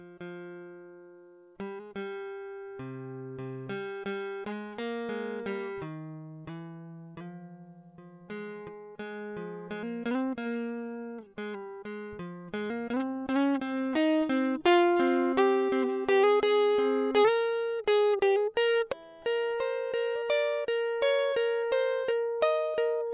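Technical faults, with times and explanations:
No technical faults detected.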